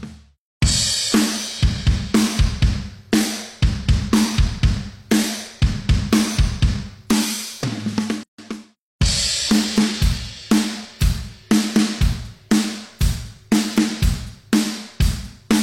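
At 8.23 s the sound drops into silence for about 150 ms, ending at 8.38 s, with smeared edges, then resumes exactly where it stopped. This is a gap at a join of encoded pieces. The audio was encoded in separate sections, roughly 10 s long, and joined without trimming, so the encoder's start-up delay and the padding of the previous section's last frame both remain as dead air at the seam.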